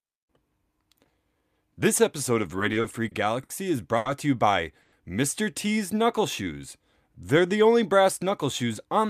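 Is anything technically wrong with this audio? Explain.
Yes. This speech recording has five separate delivery problems, all typical of audio arriving over a packet network.

The repeated stalls (stutter) run from 2.59 to 3.52 s. The jitter buffer ran dry five times in under a second, and each time the receiver held the last sound until more packets came in. The longest of these gaps was 60 ms. Together they add 140 ms of filled-in sound, about 15% of that stretch, and nothing is lost. The speech drags and catches in short hiccups rather than flowing.

The short stall from a late packet comes at 3.97 to 4.08 s. One packet missed its playout time, so the buffer emptied and the receiver stretched the preceding sound for 80 ms before carrying on from the same point. No speech is dropped, but the delay grows by 80 ms. One sound is held unnaturally long, with a faint buzzy or dipping quality where the stretch sits.

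At 4.81 to 4.95 s a call audio freeze puts a 110 ms hold into the speech. The last sound continues as a fading buzz instead of dropping to silence, and then the speech resumes where it left off, with nothing missing. The most likely cause is packets being held up in transit until the buffer emptied, with the receiver filling the wait. That adds 110 ms to the delay.

The jitter buffer slow-down spans 5.94 to 6.60 s. To rebuild a reserve, the receiver repeated single pitch periods and pieces of pauses over and over. This adds 57 ms and brings playback to about 93% speed. The pitch stays the same, but the speech sounds drawn out, with lengthened sounds and perhaps a slight warble.

Near the end, from 8.63 to 9.05 s, there is a jitter buffer speed-up. The buffer was holding more than its target, so the receiver trimmed short pieces of one or a few pitch periods in succession, removing roughly 40 ms in all. 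The speech plays at about 107% speed at unchanged pitch and comes across as hurried.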